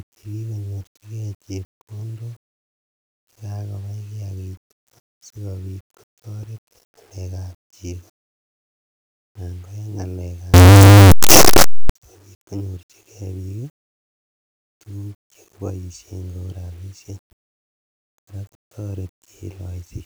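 A speech recording breaks into a blast of harsh, very loud distortion from 10.54 to 11.90 s. The likely cause is signed and unsigned samples mixed up, so every zero crossing jumps across the whole 8-bit range. On a waveform that stretch becomes a solid block pinned near the rails. A spectrogram shows dense broadband energy from the lows to the top, with quiet moments no softer than the rest.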